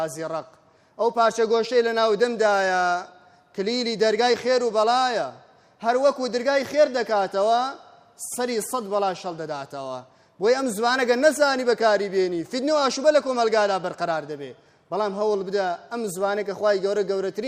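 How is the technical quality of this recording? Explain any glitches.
The technical quality of this recording holds up, with no glitches to explain.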